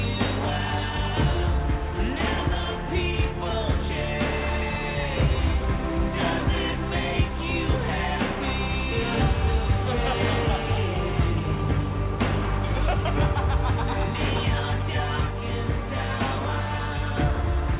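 No technical faults can be heard anywhere here.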